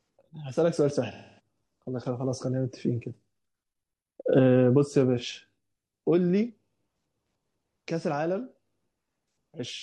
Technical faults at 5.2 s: AAC frame loss with concealment

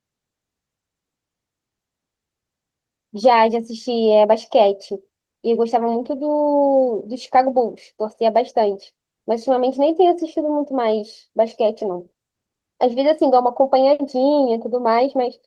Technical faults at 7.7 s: none

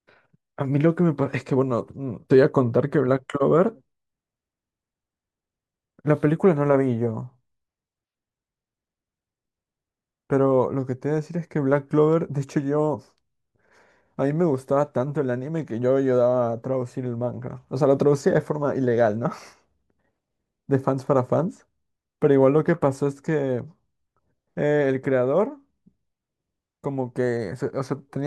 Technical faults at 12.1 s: dropped samples

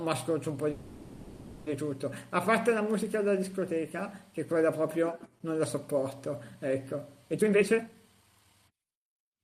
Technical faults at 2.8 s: none

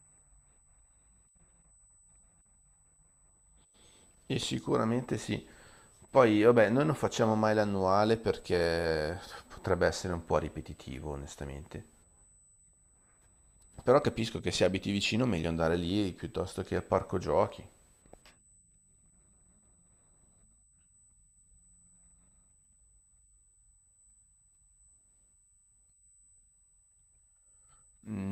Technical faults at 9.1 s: USB whine

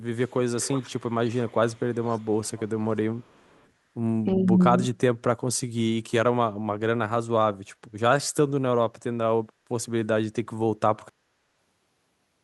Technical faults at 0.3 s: echo leak

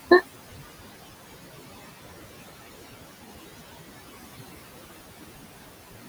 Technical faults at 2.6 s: noise suppressor artifacts

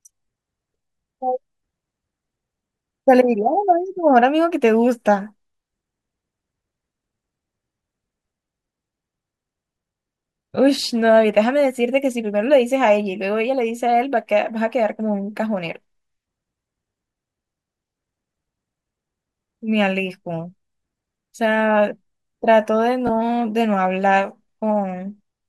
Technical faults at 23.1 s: Bluetooth stutter

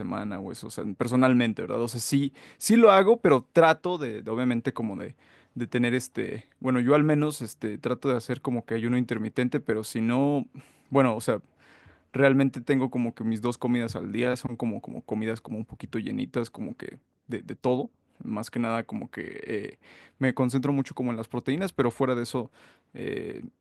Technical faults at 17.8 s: none

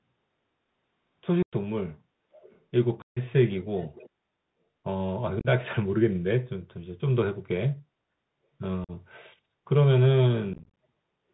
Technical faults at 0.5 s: Bluetooth CVSD headset codec

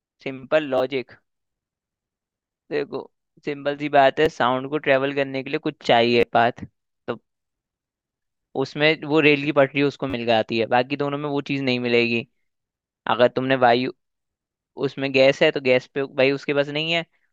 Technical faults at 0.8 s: repeated buffer

